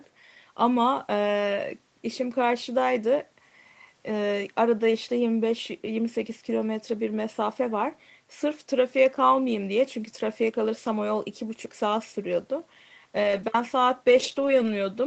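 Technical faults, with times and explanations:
10.09–10.15 s, 13.23–13.45 s and 14.07–14.69 s: lost packets rebuilt from error correction. Low-bitrate backup copies fill 40, 120 and 320 ms spans, so there is no waveform gap but the spectrogram turns smeared and noisy.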